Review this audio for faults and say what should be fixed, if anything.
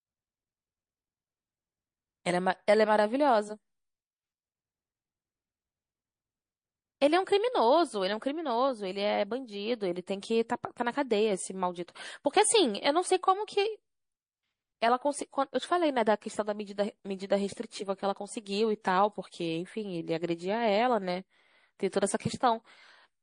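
The speech carries a watery, swirling quality throughout, with sibilants turning metallic and chirpy and the top end sounding dull. The likely cause is MP3 compression at a low bitrate, consistent with something around 40 kbps. Starved of bits, the encoder removes the treble above a fixed frequency and drops weak spectral lines that switch on and off from frame to frame. On a spectrogram this shows as a hard horizontal ceiling on the high frequencies, with speckled, flickering holes in the upper bands below it. Encoding at a higher bitrate, or with a lossless format, would prevent this.

Pre-echo occurs at two sharp onsets, at 18.81 s with a 33 ms smear and at 21.90 s with a 24 ms smear. Just before each attack a short hiss rises about 15 dB and about 14 dB above the surrounding floor. Both attacks sound softened. The codec spreads quantisation noise across a whole transform block of about 52 ms, so noise meant for the loud attack leaks into the quiet moment before it. 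This points to the encoder never switching to short blocks. A waveform shows a thin fuzzy ramp leading into each transient, and a spectrogram shows a broadband smudge just ahead of the vertical attack line. An encoder that switches to short blocks on transients would prevent it.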